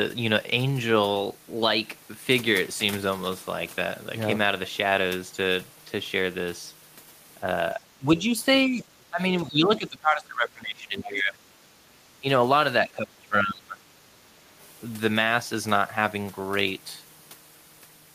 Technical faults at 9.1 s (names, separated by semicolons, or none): speech suppressed in double talk